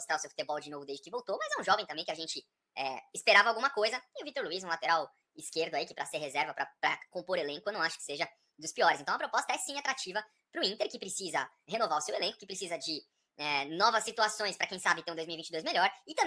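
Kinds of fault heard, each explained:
Wrong sample rate: The audio is being clocked out faster than it was captured, with no rate conversion between the two, and the mismatch fits material recorded at 16 kHz but played back at 22 kHz. Because every sample simply arrives sooner, timing and pitch shift together for the whole clip: the sound runs about 1.38 times too fast and sits about 5.55 semitones high, giving it a hurried, raised, chipmunk-like character from start to finish.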